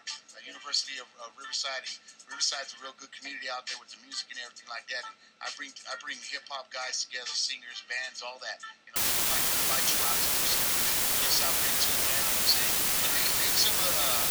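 From 8.96 s to the end, a low bit depth with dither fault sets in. The signal is rounded to very few levels, consistent with about 3 bits, but dither added beforehand turns the rounding error into a steady, even hiss, louder than the sound itself, rather than gritty distortion that tracks the signal.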